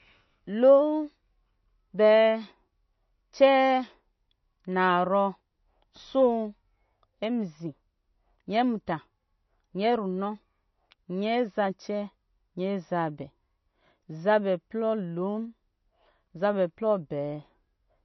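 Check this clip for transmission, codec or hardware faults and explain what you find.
One codec fault runs through the whole recording: MP3 compression damage, plainly audible from start to end. Nothing reaches above 6 kHz, so the speech sounds dull and sibilants lose their edge. The likely cause is an MP3 encoder starved of bits, consistent with a low bitrate around 32 kbps. The encoder removes the treble at a fixed cut-off and drops weak frequency lines that flicker between frames, giving a watery, swirly texture and smeared consonant attacks.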